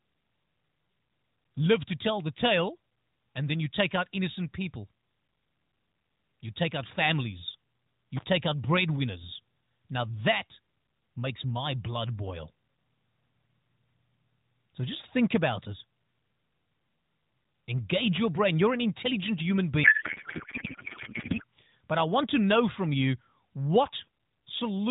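At 8.17 to 8.24 s, between "take out families" and "out breadwinners", an intermittent contact interrupts the speech. A loose plug or cable opens for about 41 ms, so the signal drops away with small crackles at the edges as the contact breaks and remakes, leaving only faint hiss in the gap. On the waveform this is a short near-flat stretch bracketed by sharp spikes. The spectrogram shows thin vertical broadband lines on either side of a pale gap.

From 19.84 to 21.44 s, right after "an intelligent human", a codec payload misread replaces the speech with garbled, warbling noise that barely tracks the talker. The AMR frames are packed in octet-aligned form but decoded as bandwidth-efficient, so every field is read from the wrong bit positions. The narrowband AMR path still limits everything to below 4 kHz. On the spectrogram, the orderly harmonic striations dissolve into smeared, erratic energy. 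The waveform loses its speech-like shape for that 1.6 s span.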